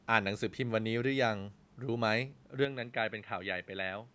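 At 2.65 s the speech abruptly turns duller and boxier and stays that way to the end, with no gap at the changeover. The top of the band drops below 8 kHz, the level falls by roughly 5 dB, and a faint new background noise appears well below the speech. The likely cause is an input switched to a poorer device. A simple filter or codec change would narrow the band without also bringing a new noise floor and level.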